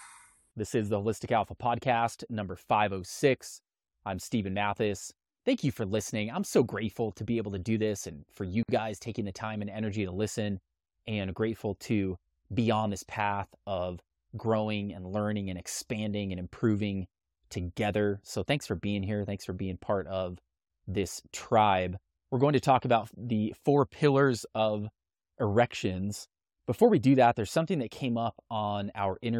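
A gap at a join of encoded pieces opens at 8.63 to 8.69 s: untrimmed encoder delay and end padding leave a 56 ms gap with smeared edges before the speech resumes.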